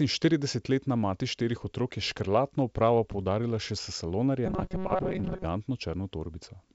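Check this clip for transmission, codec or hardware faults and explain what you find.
One fault is audible. From 4.46 to 5.45 s, the speech gets a robotic sound from repeated short buffers. It becomes a rigid, metallic buzz near 188 Hz. The likely cause is audio arriving too seldom, so about half is replaced by repeats of a roughly 5 ms buffer.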